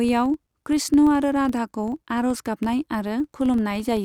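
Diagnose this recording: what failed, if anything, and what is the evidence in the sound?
A filter restarted on every block is at fault in the block-based processing stage. Throughout the speech, a regular tick pattern at 23.4 Hz forms a low buzz that rises and falls with level, which fits a 2048-sample block. The filter discards its state at each boundary and restarts from silence.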